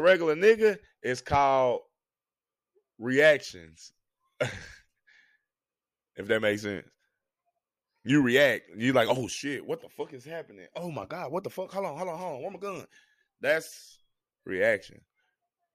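A speech recording with no audible technical faults anywhere in its signal.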